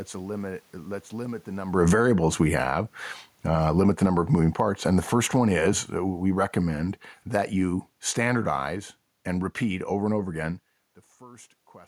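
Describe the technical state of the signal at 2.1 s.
At 2.1 s, two opposing gain changes overlap. Automatic gain falling runs from 1.61 to 2.78 s. The gain control judged the input too loud, or its background noise too strong, and began pulling its gain down, by about 8 dB overall. This comes just after the talker shifted position at the microphone around 1.5 s. The speech sinks gradually rather than stepping down. The room noise beneath it drops by the same amount, so the whole sound seems to recede.

Automatic gain rising starts at 2.01 s and lasts until 3.06 s. Here the control reacted as though the input had become too quiet. It pushed its gain back up by about 4 dB. At 2.1 s this rise has only just begun while the fall is still under way. Speech and room noise swell together, which marks this as a gain change and not the talker moving.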